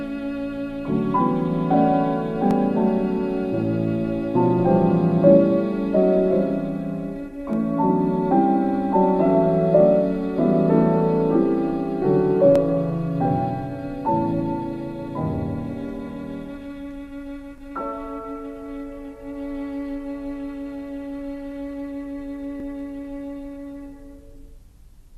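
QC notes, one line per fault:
2.51–2.53, 7.53–7.56, 12.56–12.58, 17.58–17.60 and 22.60–22.62 s: overlapping chunks. The audio is handled in 5-second blocks, and each new block starts about 23 ms before the previous one finished, so that short slice plays twice at every join. The result is a brief stutter or click repeating roughly every 5 seconds. Unlike a dropout, nothing is missing. The sound briefly repeats itself, which also nudges later material slightly late.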